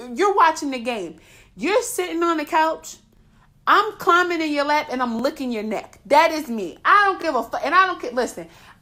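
The speech was cut into 2-second chunks that overlap at each boundary, so every join replays about 23 ms of audio already heard. This overlapping-chunks fault shows up as a brief stutter or click three times, evenly spaced: at 3.17–3.19 s after "sitting on the couch", at 5.19–5.22 s after "your lap and i'm", and at 7.22–7.24 s after "is me i don't", each a tiny doubled fragment.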